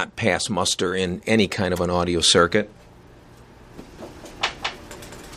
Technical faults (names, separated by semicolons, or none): corrupt frame decoded; doubled audio track